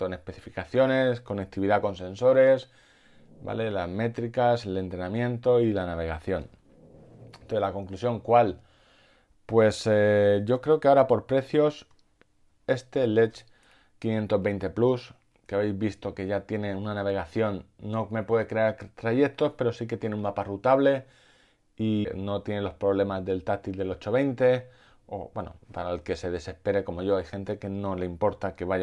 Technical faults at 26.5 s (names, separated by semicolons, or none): none